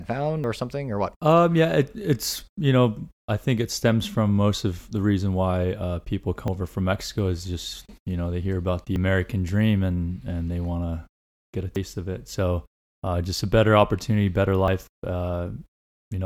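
Dropped buffers (overrun) occur at 0.44, 6.48, 8.96, 11.76 and 14.68 s. Each is heard as a jump where the speech skips abruptly forward, with no silence at the join. The likely cause is the recording program failing to collect incoming samples before the hardware overwrote them, so the sound on either side is butted together directly. Most skips lose around 40 ms. The one at 11.76 s loses roughly 70 ms, and the one at 6.48 s about a tenth of a second.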